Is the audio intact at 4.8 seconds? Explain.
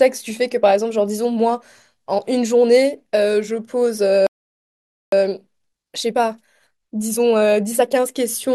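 No, 4.8 s falls inside a playback stall from 4.27 to 5.12 s: the speech cuts to silence for 0.86 s, likely because the player ran out of data.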